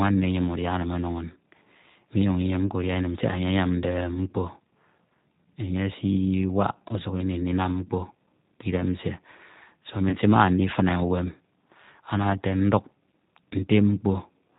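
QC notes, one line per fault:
throughout, G.729 codec: The speech runs through G.729A at 8 kbit/s. It rebuilds each 10 ms frame from a vocal tract filter, a pitch predictor and a few pulses, and passes nothing above 4 kHz. The result is plainly rough, slightly synthetic speech with a dull top end.
10.09 to 10.17 s, VoIP packet loss concealed by the speech codec: About 30 ms of audio went missing, which fits a single lost packet. The decoder extended its last pitch and filter at falling gain, giving a brief, fading smear. Because each frame builds on the last, the voice stays thin for a moment after the audio returns.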